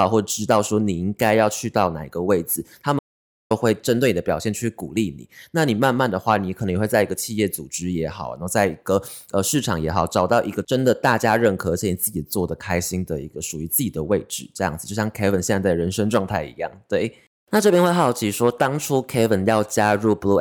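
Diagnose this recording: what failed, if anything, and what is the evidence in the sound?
An audio dropout to silence hits the speech at 2.99 s and lasts until 3.51 s, removing about 0.51 s. The input path likely failed, through a lost device or link, while recording continued writing silence. Unlike a noise gate, there is no room tone, and the speech cuts abruptly at both edges.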